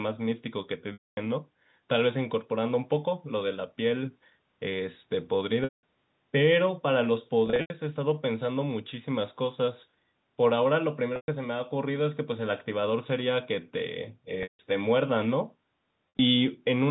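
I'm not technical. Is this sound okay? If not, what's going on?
No. Six short gaps in the speech, at 0.93, 5.64, 7.46, 11.16, 14.43 and 16.09 seconds, come from packet loss with pitch repetition. Bits of the call went missing, and the phone filled each gap by repeating the last sliver of voice, so you hear a brief buzzy, held-on sound that fades into silence before the speech resumes. The longest gap is about a quarter of a second, at 0.93 seconds.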